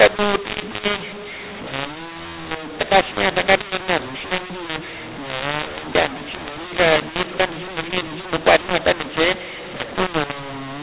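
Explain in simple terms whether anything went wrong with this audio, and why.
Something went wrong for the whole clip: a case of mu-law and A-law mixed up. The speech was stored in ordinary telephone mu-law format but played back as A-law, so loudness steps are scrambled, making the speech harsh and distorted, and the pauses hiss instead of going quiet.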